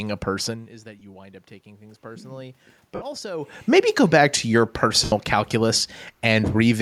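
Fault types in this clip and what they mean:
automatic gain rising: From 0.48 s to 3.51 s the voice and the room noise behind it swell together by about 5 dB. The talker had moved back and the input fell by about 19 dB, so the automatic gain control slowly raised its gain to compensate.
lost LE Audio frames: Brief noisy smears replace the sound at 0.99 to 1.02 s, 2.95 to 3.02 s and 5.04 to 5.12 s, lasting 22.5, 60 and 82.5 ms. Bluetooth LE Audio frames went missing, and the LC3 decoder filled each gap with the last spectrum under random signs.
automatic gain falling: From 3.68 s to 6.77 s the sound sinks by about 3 dB, its background sinking with it. After the talker moved around 3.5 s, the automatic gain control judged the input too loud or its background noise too strong and gradually lowered its gain.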